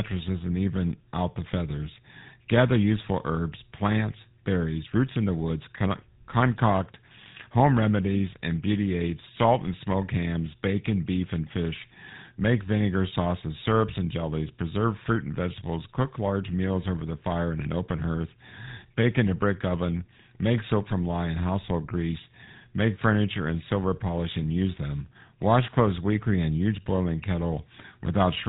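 From start to end, the speech carries GSM full-rate codec damage. The voice is rebuilt from a vocal-tract model driven by sparse regular pulses, giving a plainly buzzy, gravelly roughness. Nothing survives above 3.8 kHz. The rate fits 13 kbps.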